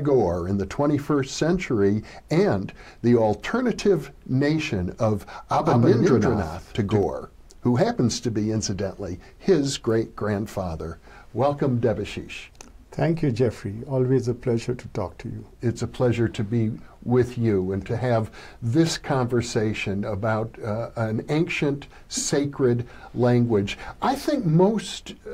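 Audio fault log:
5.53–7.03 s, doubled audio track: a dry second copy trails by around 150 ms, roughly 5 dB down, likely a slower duplicate capture path or an edit holding two copies out of step.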